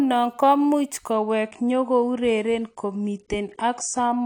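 A speech clip with an adaptive stream at a lower bitrate. At 1.12 s quality drops suddenly, without a gap. Nothing remains above 10 kHz and codec artefacts rise, which fits a fall to about 32 kbit/s.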